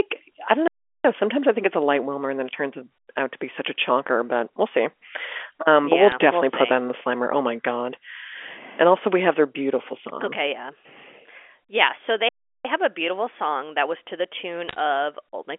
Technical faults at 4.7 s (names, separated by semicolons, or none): none